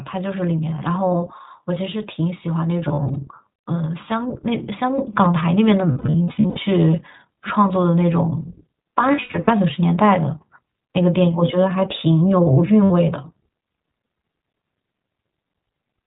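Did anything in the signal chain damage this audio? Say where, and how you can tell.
Yes. At the codec stage the whole clip carries the iLBC codec's signature. Nothing reaches above 4 kHz, and the speech sounds clear but slightly rough and synthetic throughout. The damage is plainly audible, which fits the 15.2 kbps mode with 20 ms frames. The band limit alone could be any narrowband telephone path. The buzzy, coarse texture of the excitation is what marks this as iLBC rather than a simple low-pass filter or a G.711 link.

Network packet loss produced lost iLBC frames in four places: 2.88–3.17 s, 5.92–6.59 s, 9.12–9.50 s and 12.84–12.91 s. About 120, 420, 220 and 60 ms of audio are concealed, and the first three losses are scattered in short bursts. Each gap sounds like a held, faintly buzzy vowel, because the decoder repeats the last pitch cycle with added noise. The speech comes back cleanly right after each gap. 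That sets this apart from loss in codecs that smear errors into the following frames, since iLBC frames decode independently.

At 4.98 s the microphone volume steps up, in call processing or the driver's input control. Level jumps by about 6 dB in a single step, and the speech and the background rise together. The background rising too tells this apart from a speaker moving closer or talking louder. It also differs from an automatic gain control ramp, which would glide rather than jump. It is a hardware input-volume change made by the call software.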